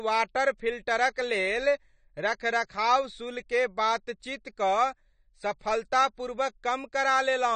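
From start to finish the speech is dull, with the top end cut away, and sibilants carry a fizzy, warbling smear. That points to AAC compression, likely AAC-LC at a low bitrate near 32 kbps. A plain low-pass filter would dull the sound without that unsteady, swirling texture.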